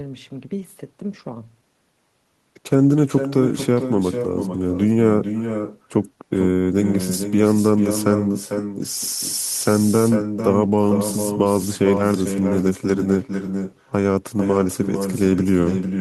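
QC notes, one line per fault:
Throughout: echo with no canceller. At the far end the call is being played on a loudspeaker, the microphone there picks it up again, and nothing subtracts that pickup before it is sent back. The speech therefore returns after the network round trip, roughly 0.4 s late at around 400 ms, and about 7 dB below the direct voice, so every phrase is trailed by a quieter, thinner copy of itself.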